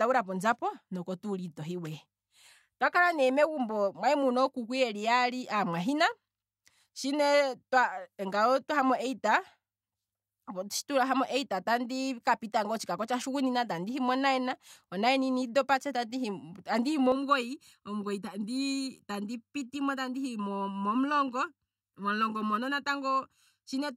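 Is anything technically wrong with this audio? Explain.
Yes. From 17.12 s to the end, channel delay (comb filtering): one channel lags by under a millisecond, and the mono sum cuts evenly spaced notches from around 700 Hz, sounding hollow and phasey.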